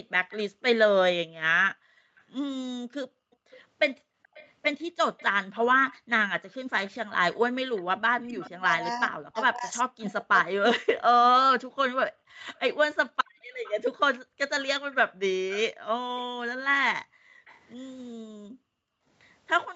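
From 0.3 to 17.6 s, an echo leak is heard: the far end's echo canceller likely let loudspeaker pickup through, so a faint copy of the speech trails about 434 ms behind, roughly 25 dB below it.

At 5.98 to 6.09 s, the echo canceller gated the background, clamping the microphone while the loudspeaker played, so the room sound drops out by about 40 dB for roughly a tenth of a second.

From 8.17 to 11.19 s, speech is suppressed in double talk: with both sides talking, the canceller likely mistook the talker for echo and turned the voice down, deeply, for around two seconds in total.

Between 11.68 and 12.47 s the same gating of the background returns, with the room sound dropping by about 40 dB over roughly 300 ms. It comes back at 15.74 s and lasts to the end of the clip, again cutting about 40 dB. Throughout, the Opus call path's 8 kHz top end can be heard.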